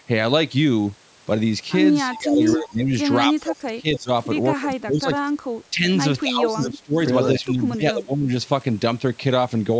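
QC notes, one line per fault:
2.07–2.91 s, 3.28–4.10 s, 4.58–5.15 s, 5.52–5.86 s, 6.22–6.96 s, 7.40–8.31 s: speech suppressed in double talk. The speech sinks in level during each span. The deepest dips reach about 20 to 25 dB, and the one at 5.52 s is shallower, about 15 dB. The likely cause is an echo canceller that heard both sides at once, could not tell the local talker from the loudspeaker echo, and turned everything down.
2.13–2.21 s and 2.46–2.54 s: echo leak. Two short scraps of a delayed copy of the speech come through, each lasting about 80 ms. The copy trails the original by 265 ms and sits about 15 dB below it. It is likely loudspeaker sound that the loudspeaker side's echo canceller failed to remove and sent back down the line. These scraps fall inside the first suppressed span.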